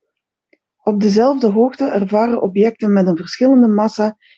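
Nothing goes wrong in this speech clip, which sounds like it came over an ordinary call link, with the top end rolling off at around 8 kHz the way a wideband Opus setting keeps it.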